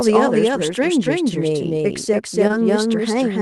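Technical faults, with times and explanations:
Throughout: doubled audio track. A second, equally loud copy of the speech trails the original by about a third of a second, with no decay or room colour, like a dry, clipped echo. This is likely a second capture path or an edit leaving two copies out of step.
2.47 to 2.54 s: short concealed packet loss. Two back-to-back gaps of about 20 ms each, starting at 2.47 and 2.51 s, leave a brief smear or wobble. The receiver patched them by extending the preceding sound, then blended back into the real audio.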